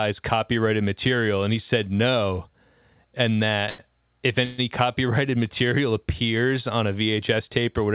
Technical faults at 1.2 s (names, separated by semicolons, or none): none